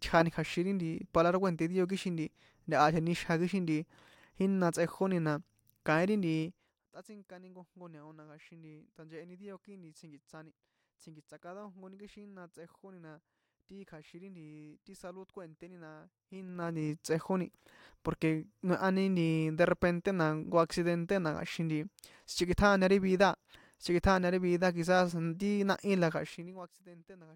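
A speech recording with a brisk ticking, like a zip being drawn, during three level moves: a drop of roughly 20 dB at 6.41 to 6.87 s, a rise of about 20 dB at 16.25 to 16.90 s after "salud kue̱nténi na" and before "tsꞌejóni porque noehani nti", and a fall of roughly 25 dB at 26.10 to 26.75 s after "ti náhí la". This is zipper noise. Each fade moves in unsmoothed 2 dB jumps, about 15 to 20 per second, and every jump clicks.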